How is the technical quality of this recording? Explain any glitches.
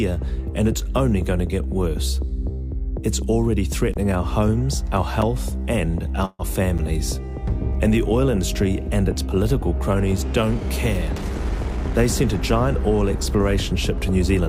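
The recording has four glitches: three short dropouts to digital silence and one brief freeze of the kind heard on calls.

Block of digital silence at 3.94 s (about 20 ms), 5.22 s (about 5 ms) and 6.78 s (about 8 ms): most likely the output buffer wasn't filled in time, so the audio dropped to silence. Each is heard as a tick or tiny hole, and shows as a flat line in the waveform.

Call audio freeze from 6.25 to 6.42 s: the sound stalls, the last moment is stretched into a fading buzz for about 137 ms, followed by about 30 ms of near-silence, then resumes exactly where it stopped. Nothing is lost, but everything after arrives about 137 ms later. The likely cause is delayed packets draining the jitter buffer. A spectrogram shows smeared, repeating bands dimming out.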